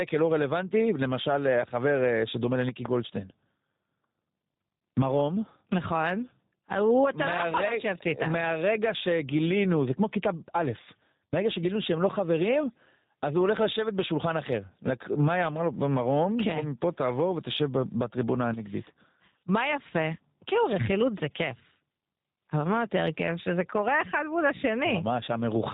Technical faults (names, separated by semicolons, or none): gain pumping; G.729 codec; loud pop